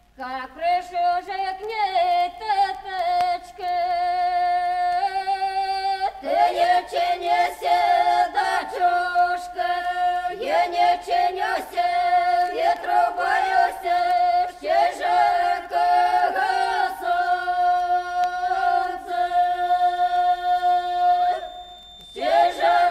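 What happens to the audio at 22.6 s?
At 22.6 s a feedback whistle is present, running from 19.47 s to the end of the clip. A thin, steady 3.6 kHz tone sits about 25 dB below the sound, swelling and fading slowly in level. The likely cause is a loudspeaker-to-microphone loop held just short of runaway feedback.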